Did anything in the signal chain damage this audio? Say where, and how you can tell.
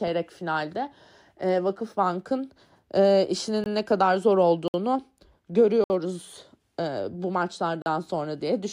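Yes: the speech drops into short dead holes at 3.64 s (20 ms), 4.68 s and 5.84 s (60 ms each), and 7.82 s (40 ms). These are blocks of digital silence, which points to an output buffer left unfilled in time.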